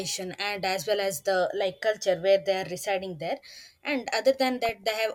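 DAB burbling runs from 4.65 to 4.93 s near the end of the speech. Weak reception let bit errors, on the order of 0.3 percent, slip past error correction, corrupting samples, which put short noise blips into single sub-bands. It sounds like short noise blips, consistent with roughly fifteen damaged frames.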